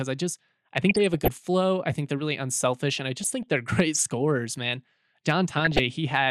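DAB burbling breaks into the speech three times: 0.89 to 1.28 s, 3.20 to 3.43 s, and 5.57 to 5.79 s. Weak reception leaves a few bit errors in every thousand, which suggests the error correction failed to catch them. Corrupted sub-band samples put short blips of noise into single sub-bands, and corrupted scale factors make sub-bands jump in level for up to a frame, giving short noisy blips. Unlike a dropout, the sound never goes silent. Unlike steady codec swirl, the bursts come and go abruptly.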